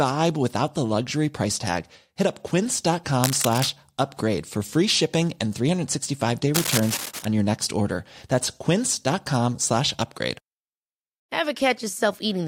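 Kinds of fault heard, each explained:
Cable scratch noise: ragged broadband crackle, only slightly below the speech level, at 3.24–3.70 s before "upgrade for free shipping" and 6.54–7.25 s before "on your next order". A worn connector is the likely cause. Spectrogram shows irregular vertical smears, waveform jagged spike clusters.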